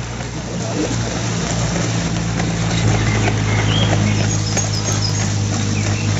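The audio has come through a call link, so nothing sits above 8 kHz, which fits a wideband codec along the lines of G.722. The real problem is CD scratch ticks: between 4.41 and 5.27 s there are six short clicks, the longest only about 2 milliseconds, about seven a second. That's a disc blemish coming round once per rotation, wiping out more data than error correction can fix, so the player patches or mutes those samples.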